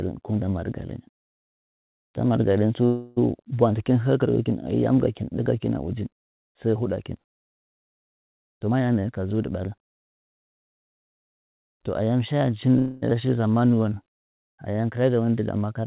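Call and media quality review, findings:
Call audio freeze, twice: 2.86–3.19 s (about 0.3 s) and 12.79–13.04 s (about 0.23 s). Last sound stretched into a fading buzz or hiss, then picks up where it left off. Likely delayed packets draining the jitter buffer; nothing lost, just added delay.

Jitter buffer speed-up, 8.52–9.68 s: runs at 125% speed, same pitch, clearly hurried. Buffer was over its target, so it clipped out short pitch-period chunks back to back, around 0.3 s in total.

Skip ahead, 13.10–13.13 s: playback jumps forward, roughly a fifth of a second gone, both sides spliced almost directly. Audio dropped in transit or by the jitter buffer overflowing while later packets were already queued, pulling delay back down.

Jitter buffer slow-down, 13.25–14.82 s: right after the skip, audio drags at 90% speed, pitch unchanged, sounds drawn out. Buffer running low or raising its target, so it repeated single pitch periods or pause fragments, adding about 0.17 s. 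Whole clip is band-limited to 4 kHz, which fits a narrowband G.711-type call codec.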